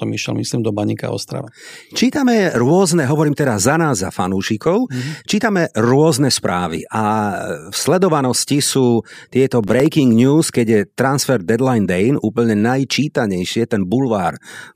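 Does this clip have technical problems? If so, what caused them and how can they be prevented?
Yes, there's processor overload crackle from 9.64 to 9.86 s, where several tiny buffers missed their deadlines and dropped to silence, tearing the speech. Bigger buffers or a lighter CPU load would prevent it.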